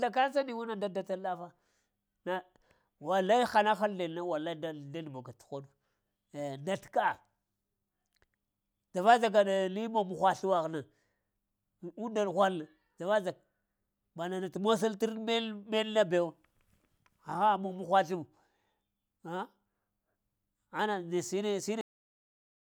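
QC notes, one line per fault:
21.81 s, cut-off end: the speech stops mid-sound at 21.81 s and drops straight to digital silence with no decay for the final 0.81 s. The closing stretch of audio was never written out, so the waveform is simply truncated instead of ending naturally.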